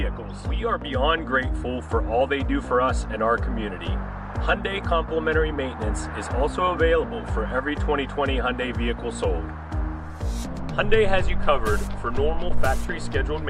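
Listening closely from beginning to end, nothing stood out as a technical problem anywhere in the recording.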